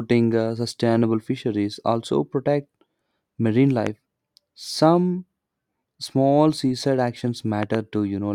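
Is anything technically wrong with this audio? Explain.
Yes. There is a loud pop at 3.87–3.89 s and a double pop at 7.63–7.77 s, peaking about 10 dB and 15 dB above the speech. These are likely voltage pulses from a switch, plug or static, which the speech continues underneath.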